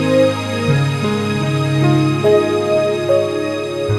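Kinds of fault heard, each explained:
Nothing stood out on listening; no fault could be heard anywhere in the audio.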